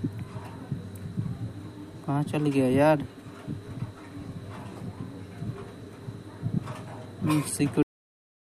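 Cut-off end at 7.83 s: the final buffers were never written, so the sound stops mid-event and drops straight to digital silence for the last 0.7 s, with no decay.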